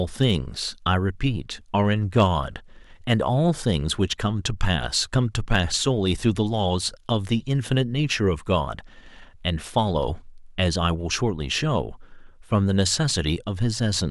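Speech with brief crackles on loud peaks at 0.22–0.31, 2.17–2.24, 5.52–5.56, 9.77 and 12.79–12.81 s: hard clipping, where peaks overrun the stage by up to about 4 dB and are sliced flat.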